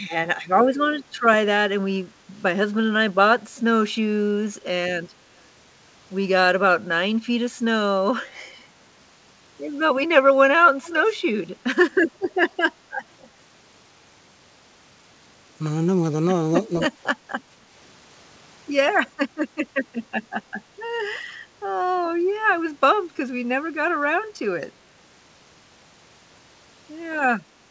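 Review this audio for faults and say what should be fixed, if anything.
Echo leak at 10.82 to 11.09 s, and again briefly at 13.22 to 13.29 s: a delayed copy of the speech returns about 242 ms behind the original, faint in the first stretch and barely audible in the second. The likely cause is a loudspeaker at one end feeding its microphone, with the echo canceller leaving residual signal that was sent back. To prevent it, tune or enable that endpoint's acoustic echo cancellation, or have the user wear a headset.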